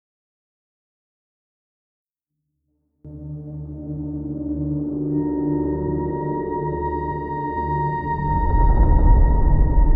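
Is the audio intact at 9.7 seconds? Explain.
Yes, the audio is intact at 9.7 seconds, with no fault present at that moment.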